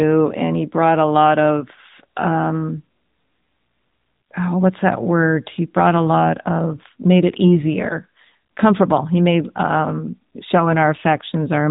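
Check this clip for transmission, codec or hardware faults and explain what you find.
The speech has passed through a narrowband mobile codec, and the damage is plainly audible.

AMR narrowband mobile codec, throughout the clip. The audio is sampled at 8 kHz and rebuilt from a vocal-tract model excited by a handful of pulses per 5 ms subframe, so nothing survives above about 3.8 kHz. Sibilants lose their hiss and the voice sounds boxed-in and telephone-like, with a buzzy, synthetic edge. The degree of coarseness fits a higher AMR-NB mode of around 10.2 kbps.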